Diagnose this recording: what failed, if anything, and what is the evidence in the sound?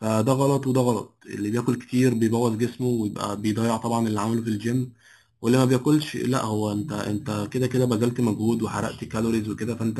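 Imaging from sample-and-hold upsampling runs through the whole speech clip, introduced at the sample-rate conversion stage. The speech carries a bright, metallic fizz that rises and falls with its level, strongest in a mirrored band between 4 and 8 kHz and about 20 dB below the speech. Each sample was simply repeated with no smoothing filter, which fits a low rate near 8 kHz being raised to 48 kHz and leaves mirror copies of the spectrum above the original band.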